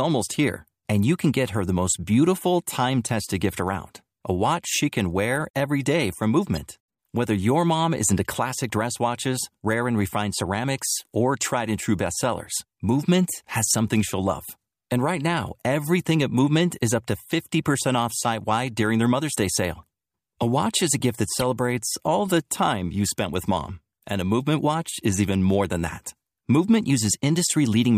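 At 19.78 to 19.82 s, a corrupt frame decoded in the speech produces a faint blip, low in level. At 21.39 to 21.43 s, just after "gift that", a second one is far more prominent, roughly 25 dB louder. Each spans a couple of frames. Damaged bits were decoded as though valid, so misread gains and codes placed energy at wrong frequencies for the frames' duration, giving a brief chirp-like burst.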